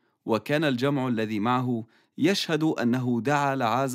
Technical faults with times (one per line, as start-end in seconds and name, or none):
none